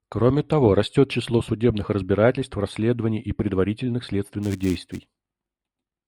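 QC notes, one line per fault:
throughout: channel delay (comb filtering). One channel arrives a few samples late, roughly 0.07 ms, and the mono sum cancels energy near 7 kHz, sounding hollow or phasey. A spectrogram shows a fixed dark horizontal notch band around 7 kHz.
4.43–6.07 s: filter restarted on every block. Each block starts from a cleared filter state, adding a small transient and producing a 200 Hz buzz, which fits roughly 5 ms blocks. The waveform shows regularly spaced spikes scaling with level; the spectrogram shows evenly spaced vertical striations.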